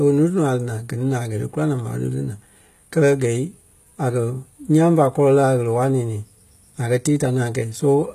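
From start to finish, s sounds come across gritty and lispy, and the upper range has a bright but metallic sheen, with nothing above about 14.9 kHz. The likely cause is HE-AAC compression: rebuilding treble from copied lower bands leaves mismatched harmonics, which fits a bitrate around 20 kbps.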